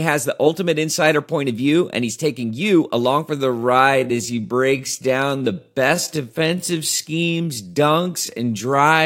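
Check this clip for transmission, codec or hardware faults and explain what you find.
One fault is present: a time-stretched section running from 3.31 s to the end of the clip, starting right after "he's taking you along". At that point the pace drops abruptly to about 0.63 times normal speed while the pitch stays unchanged. The likely cause is software lengthening the audio to fill a target duration by repeating short segments rather than resampling, which preserves pitch. The slowed speech drags, with unnaturally drawn-out syllables.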